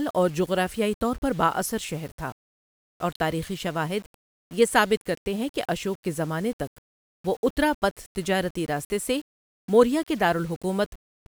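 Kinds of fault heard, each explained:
Low bit depth without dither: The speech was likely reduced to about 7 bits and rounded to the nearest step with no dither noise added first, so the rounding error tracks the signal instead of spreading into a smooth hiss. Throughout the clip a grainy, gritty distortion rides on the speech at roughly 30 dB below it. The grit is most obvious on quieter syllables and decaying word endings, where the sound breaks into rough sputtering or drops abruptly to silence.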